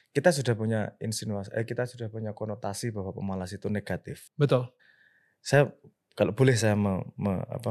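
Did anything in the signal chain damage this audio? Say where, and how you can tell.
No, nothing in the signal chain audibly damaged this speech; the signal stays continuous and steady from one stage to the next, with no point where the chain can be heard altering it.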